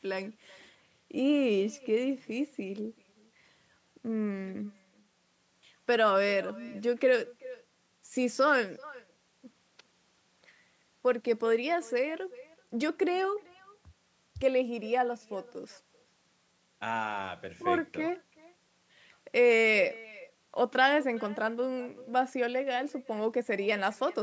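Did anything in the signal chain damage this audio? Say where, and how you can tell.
Yes: echo with no canceller throughout, in the call path. Speech repeats roughly 400 ms later, about 22 dB quieter, as far-end loudspeaker sound re-enters the microphone uncancelled.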